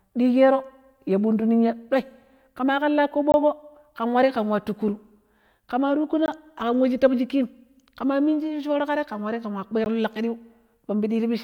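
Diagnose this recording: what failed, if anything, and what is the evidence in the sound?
Three brief dropouts to dead silence: 3.32 to 3.34 s right after "ɗoi ƙema ƙan la", 6.26 to 6.28 s just before "aƙam we", and about 16 ms at 9.84 s. These are blocks of digital silence at the driver or buffer stage, most likely where the output buffer went unfilled and zeros were played.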